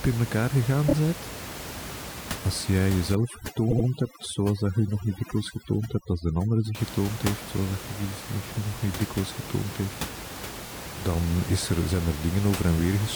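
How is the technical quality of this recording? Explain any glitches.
Three stutters and a stretch of heavy-handed noise reduction mark the recording, with room noise sitting only about 11 dB below the speech.

Repeated frames occur at 0.88 s, right after "in elkaar gegaan", at 3.70 to 3.85 s, and at 10.65 s, between "niet dikwijls getoond heeft" and "dan is er zijn". Each time a block of compressed audio is decoded three times in a row: 26 ms at the first and last, adding 52 ms each, and 78 ms at 3.70 s (which fits three 26 ms frames), adding 157 ms. The result is a brief stammer. A waveform shows identical slices repeated back to back, and a spectrogram shows copied columns.

Overdone noise removal runs from 3.15 to 6.75 s, ending just before "getoond heeft zoals dat". The noise suppressor was set too aggressive, so every frequency band near its noise estimate is pushed far down or off, and the soft edges of the speech are cut along with the room noise. 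The pauses drop to near silence with sparkling specks. A spectrogram shows the noise floor gone dark, broken by scattered isolated dots, with ragged, eroded speech harmonics.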